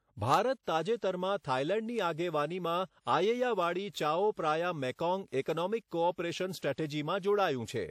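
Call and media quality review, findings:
Word clock ticks, 0.34 to 7.47 s: about fifteen sharp ticks of uneven strength, roughly every half second. Digital-link receiver free-running against sender, clocks about 40 ppm apart; each slip drops or repeats one sample.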